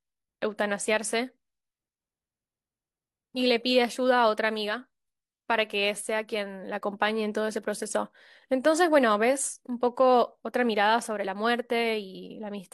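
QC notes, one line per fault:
No audible faults found anywhere in the recording.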